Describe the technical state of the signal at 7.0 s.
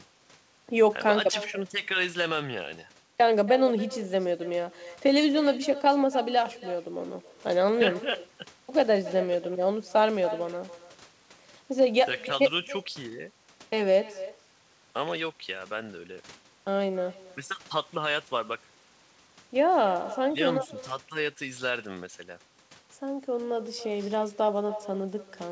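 Echo with no canceller, present throughout: the far end's microphone re-captures its loudspeaker, so at 7.0 s speech repeats roughly 300 ms later, about 16 dB quieter.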